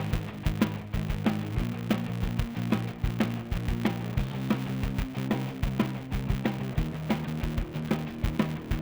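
A filter restarted on every block runs throughout: it drops its stored state at each block boundary and begins from silence, so every block opens with a small transient. Those transients repeat 200 times a second, producing a steady 200 Hz buzz that rises and falls with the level of the sound.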